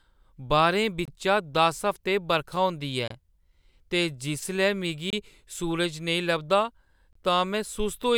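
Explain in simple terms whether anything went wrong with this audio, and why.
The speech arrived in two-second chunks, with a gap between chunks at each join. Each time, a brief silence of about 25 milliseconds cuts in: at 1.05–1.08, 3.08–3.10, 5.10–5.13 and 7.13–7.15 seconds, heard as sharp, regular holes in the sound.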